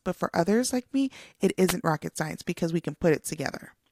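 A wireless microphone noise hit occurs from 1.67 to 1.74 s, between "others like me it" and "rocket science because we". For about 60 ms the radio link from the analogue FM microphone fades as reflected signals arrive out of phase and cancel at the receiver. With the carrier weakened, receiver noise rises and breaks through the speech, producing a brief swish of static before the signal recovers and the speech returns.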